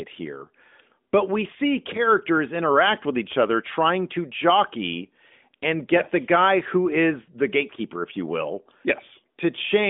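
There are no technical faults to describe in this speech recording.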